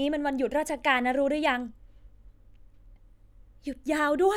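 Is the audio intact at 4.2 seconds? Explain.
Yes, at 4.2 seconds the speech plays through intact, with no dropout, click or other fault at that moment.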